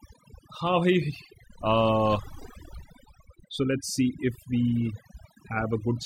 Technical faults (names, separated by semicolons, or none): overdone noise removal